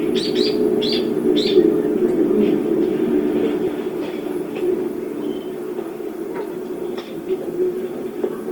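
Throughout the clip, tones come across noisy, rough and grainy, with the damage plainly audible but little swirling, and content still reaching about 20.2 kHz. This is likely Opus compression in its music mode, filling starved bands with folded or noisy energy, which fits a rate near 24 kbps.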